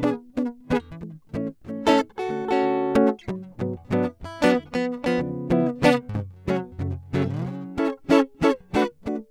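No faults come through anywhere in this music clip; it's a straightforward listen with nothing technical to flag.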